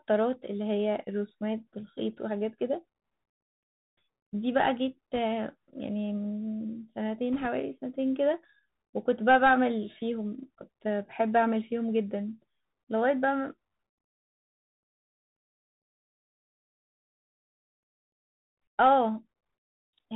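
The whole recording of speech has passed through the Bluetooth CVSD headset codec. It encodes one bit per sample at 64 kHz, stepping up or down with an adaptive step. Nothing above 4 kHz survives. S sounds turn scratchy, and a granular hiss sits underneath throughout.

Bit errors on a Bluetooth voice link appear from 5.15 to 5.19 s and again from 7.34 to 7.47 s. Roughly one or two bits in a hundred are flipped. Each bit carries little weight, so there are no hard clicks, just brief rushing crackle.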